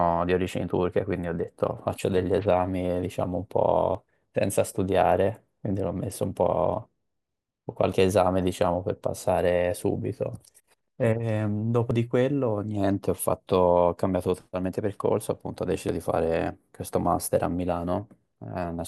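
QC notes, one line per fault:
3.95, 7.93, 11.91, 15.89 s: audio missing between chunks. The recorder likely drops a brief piece at each 4-second chunk boundary, so the speech skips forward abruptly.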